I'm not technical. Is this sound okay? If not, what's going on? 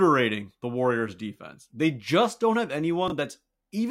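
No. There is one glitch, right after the words "just don't have", at about 3.08 to 3.12 seconds. It is a fault called chunks out of order. The audio travels in tiny slices, here about 20 milliseconds each. One slice arrived a step late and played after the slice meant to follow it. Nothing goes missing. The order is just swapped. You hear a brief jumbled blip.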